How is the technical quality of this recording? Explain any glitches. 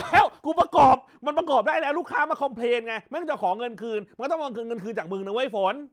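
No glitches or faults are audible.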